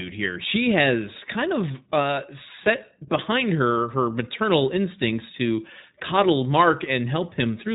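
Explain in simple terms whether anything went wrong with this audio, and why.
Yes, something's off: the whole clip, start to finish, has gone through the iLBC codec, a phone-style speech codec built for internet calls. It throws away everything above about 3.8 kHz, so the speech sounds muffled and boxed-in, like an old landline. It also chops the sound into short chunks, likely 20 ms each, and rebuilds each one separately, which gives the speech a clearly rough, slightly robotic edge.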